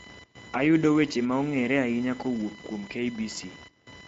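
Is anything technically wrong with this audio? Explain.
Yes, two problems run through the whole clip.

First, computer activity noise: a buzzy whine pulsing at roughly a kilohertz, sitting about 20 dB under the speech. Processor or graphics load is shifting the audio circuit's shared ground, so the buzz follows the machine, not the talking.

Second, Speex codec damage, plainly audible throughout. The speech sounds hoarse and grainy because this CELP codec has few bits for the excitation. The rate points to a mid setting around 17 kbps. Nothing survives above 7.7 kHz, and the top band sounds like shaped noise.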